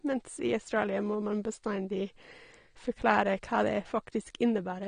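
Dull, smeared speech runs the full length of the clip, with plainly audible coding damage and nothing above 9.7 kHz. The likely cause is AAC compression: an AAC-LC encoder at a low rate, around 32 kbps, lowered its cut-off and quantised the remaining spectrum coarsely against its hearing model.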